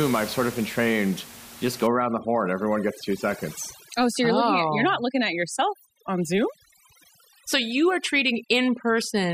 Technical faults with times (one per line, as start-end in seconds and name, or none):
1.87-9.34 overdone noise removal